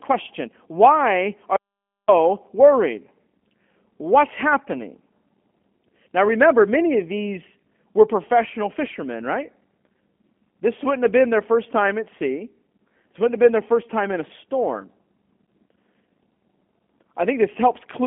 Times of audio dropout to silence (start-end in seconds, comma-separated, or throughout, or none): 1.56-2.08